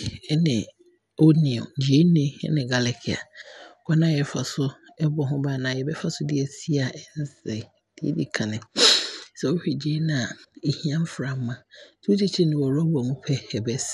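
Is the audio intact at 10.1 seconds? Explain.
No. At 10.1 seconds the speech is still carrying the damage that runs through the whole clip, most likely from MP2 compression at a starved bitrate, which fits roughly 80 kbps. The encoder divides the spectrum into 32 sub-bands and runs out of bits, so the upper bands switch off and flicker back, while the remaining ones are quantised coarsely. The result is a dull, muffled top end with a gurgling, grainy roughness.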